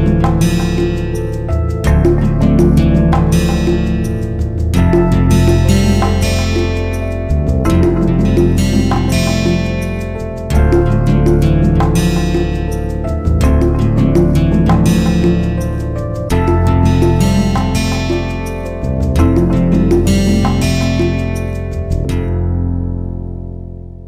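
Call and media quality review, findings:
Chunks out of order, 8.94–8.98 s: brief jumbled blip. Two 20 ms chunks swapped, one arriving a chunk late, so three hard joins. Nothing missing, just reordered. Probable culprit is the jitter buffer or write path.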